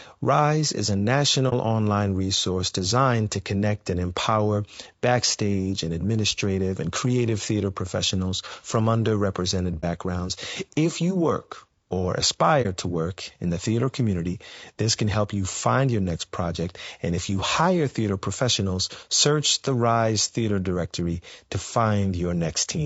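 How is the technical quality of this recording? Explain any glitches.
The recording has two kinds of fault: constant codec damage and three brief dropouts.

Throughout, the speech sounds rough and grainy. There is noise between the harmonics and a thin, synthetic top band. The likely cause is low-delay AAC compression, AAC-ELD, at a low rate. The damage fits roughly 32 kbps. Its short frames resolve pitch poorly at that rate.

Three short holes come from AAC frame loss with muting. The first is at 1.49 to 1.53 s, after "is a" and before "online resource designed to". The second is at 9.81 to 9.84 s, after "theater professionals from underrepresented". The third is at 12.62 to 12.66 s, between "you work or" and "to work in the". About 30 ms of audio is zeroed each time. The overlapping windows fade it out and back in, so each gap is a brief, soft-edged dip.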